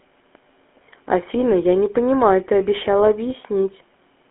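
GSM full-rate codec damage runs through this whole speech clip, giving a buzzy, gravelly roughness from pulse-driven vocal-tract coding consistent with 13 kbit/s, with the band held to 250 Hz–3.4 kHz and nothing above 3.6 kHz. A DC step at 0.35 s shifts the waveform's zero line abruptly, heard as a single low thump or click, and the offset then holds to the end while the speech carries on unchanged.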